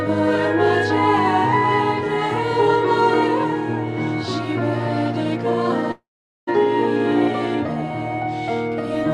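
At 5.91 s the sound smears into a fading buzz and then goes near-silent until 6.49 s, with 0.56 s missing: likely a long network dropout.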